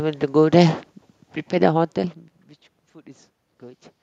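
No technical fault can be heard in this speech recording: the background noise belongs to the room around the microphone, and the shift in level at about one and a half seconds comes from the talker moving relative to the microphone, not from anything in the signal chain.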